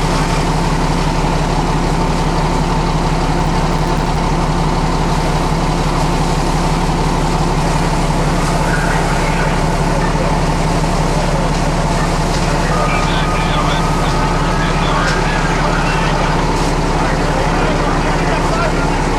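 From 3.38 to 4.16 s, processor overload crackle tears through the sound. Around twenty tiny buffers, a few milliseconds each, miss their deadlines and drop to hard-edged silence.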